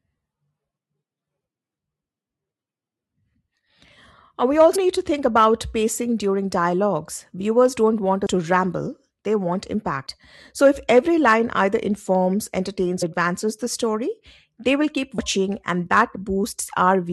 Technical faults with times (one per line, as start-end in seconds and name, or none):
4.75 compressed frames skipped
8.25 compressed frames skipped
10.06 compressed frames skipped
13.01 compressed frames skipped
15.17 compressed frames skipped